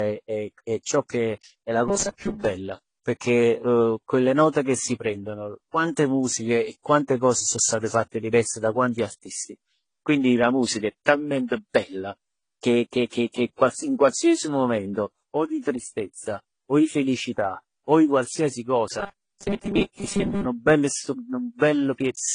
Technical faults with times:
0.00-22.34 transcoding between lossy codecs
1.88-2.45 robotic sound from repeated short buffers
19.00-20.45 robotic sound from repeated short buffers

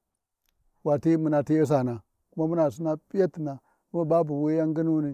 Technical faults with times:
none

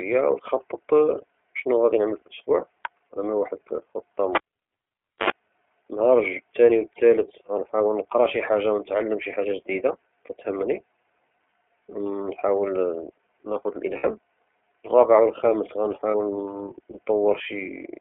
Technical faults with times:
0.00-18.00 iLBC codec
4.35-5.30 cable pulled and plugged in
13.97-14.05 lost iLBC frames
16.11-16.15 lost iLBC frames

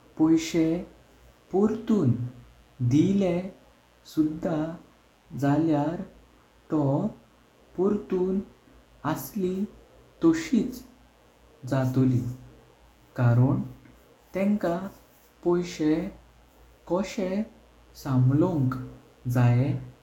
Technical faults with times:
0.00-20.02 mains buzz

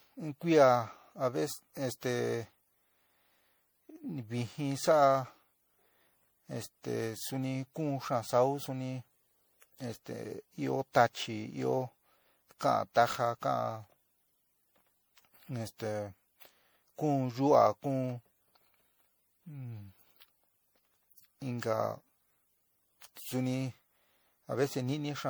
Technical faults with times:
0.00-25.29 generation loss

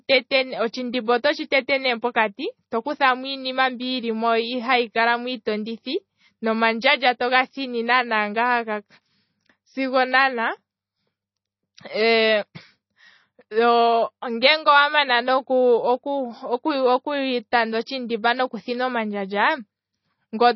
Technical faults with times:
0.00-20.55 MP3 compression

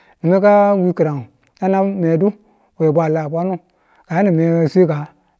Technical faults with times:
none

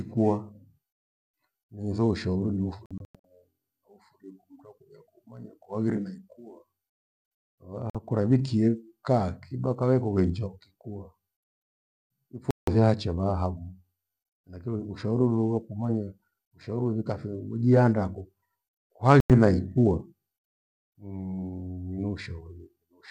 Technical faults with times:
2.86-3.25 digital broadcast dropout
7.90-7.95 digital broadcast dropout
12.51-12.68 digital broadcast dropout
19.20-19.30 digital broadcast dropout

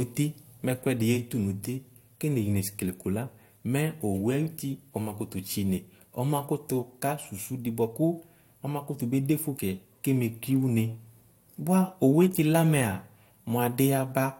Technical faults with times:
none

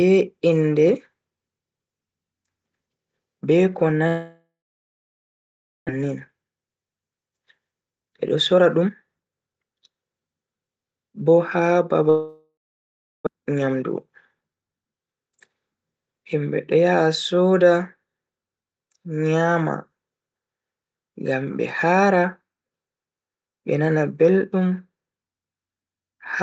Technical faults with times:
4.07-5.91 long network dropout
7.17-10.35 jitter buffer speed-up
12.09-13.29 long network dropout
13.36-14.83 jitter buffer speed-up

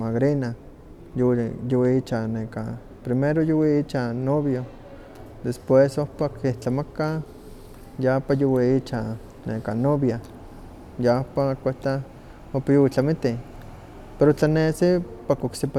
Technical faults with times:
none

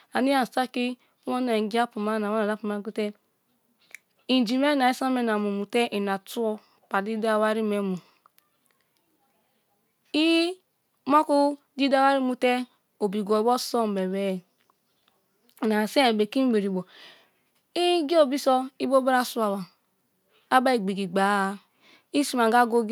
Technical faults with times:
none

